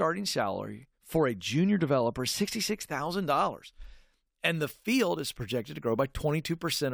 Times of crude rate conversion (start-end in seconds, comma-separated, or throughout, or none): 4.54-6.93